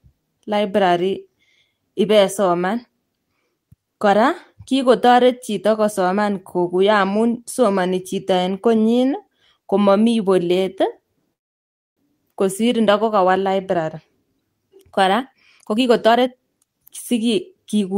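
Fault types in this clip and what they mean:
Call audio freeze: around 11.33 s the sound drops to silence for about 0.63 s, likely a jitter buffer running dry, then resumes where it stopped with nothing lost.
Jitter buffer speed-up: from 15.13 s to the end, the speech runs about 117% speed at the same pitch as the receiver trims roughly half a second of backlog.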